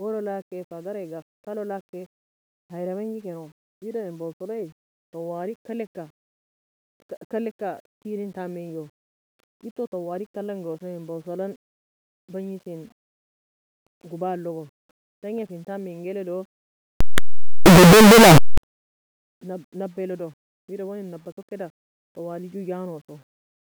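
Signed and unsigned mixed up, 17.0 to 18.6 s: the speech becomes a loud, harsh roar with quiet moments as loud as the rest, likely from 8-bit samples read with the wrong sign convention.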